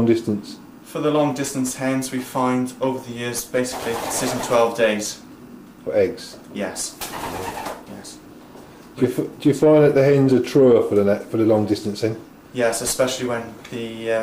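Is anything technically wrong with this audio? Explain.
No, there's nothing technically wrong with this audio.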